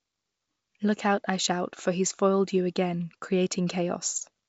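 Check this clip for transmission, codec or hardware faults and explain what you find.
No faults found; the speech comes over a G.722 wideband link at 64 kbit/s, leaving at most a faint trace of the coding.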